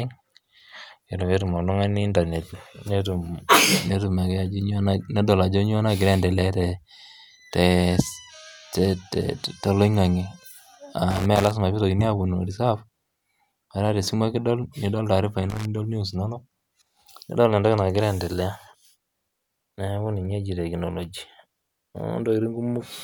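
Loose connector crackle hits from 11.11 to 11.51 s and again from 15.50 to 15.66 s. A dirty contact chops the speech. Irregular scratchy bursts result.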